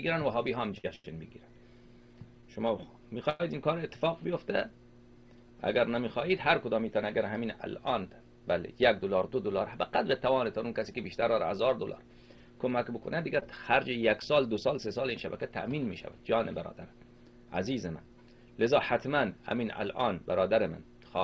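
From 0.78 to 3.42 s the sound drags and stutters, catching four times as it holds and stretches what it was already doing, the longest hold lasting 99 ms. These are repeated stalls (stutter): packets arrived late, the jitter buffer kept running dry, and the receiver extended the last sound, 259 ms in all, about a tenth of that stretch, with nothing actually lost.

Between 9.01 and 10.05 s the audio sounds slightly rushed at an unchanged pitch, running at 107% of normal speed. This is jitter buffer speed-up: with too much audio queued, the receiver trimmed tiny pitch-length slices, around 70 ms in total. The same happens far more gently from 14.31 to 16.19 s, at 101%, with roughly 40 ms removed.

At 13.40 to 13.43 s there is a brief smear where 20 ms of audio is missing. This is short concealed packet loss: data never reached the decoder in time, so the receiver patched 15 ms by continuing the preceding sound and then blended back into the real signal. 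Throughout, the G.722 call codec leaves nothing above 8 kHz.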